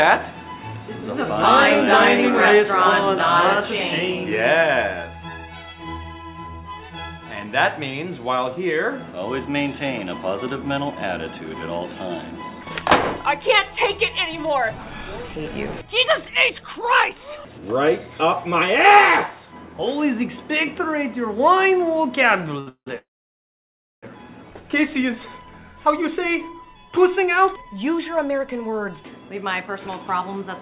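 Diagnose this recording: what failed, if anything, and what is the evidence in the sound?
A short stall from a late packet occurs at 22.6 to 22.69 s, in the network and jitter buffer stage. The sound is held for about 65 ms, with a slight buzz where it should have moved on. A packet arrived late and the buffer ran dry, so the receiver stretched the last frame until the packet arrived. Playback then resumed from the same point, so nothing is lost, but the timeline is 65 ms later than before.

Two call audio freezes follow in the same stage: 22.69 to 22.88 s, then 22.98 to 24.05 s. In each, the last sound decays as a fading buzz and then drops out. The first has about 90 ms of silence. The second lasts about 1.04 s, with nearly a second of silence. The likely cause is packets held up in transit, emptying the jitter buffer. Playback continues where it stopped, inserting gaps rather than losing audio.

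A jitter buffer speed-up runs from 27.23 to 30.49 s. The audio plays about 6% fast at unchanged pitch and sounds slightly hurried. After the stalls, the buffer held more audio than its target, so the receiver trimmed many short pitch-period segments in succession, about a fifth of a second in total, to bring latency back down. The whole clip is band-limited to 4 kHz, which points to a narrowband G.711-type call path.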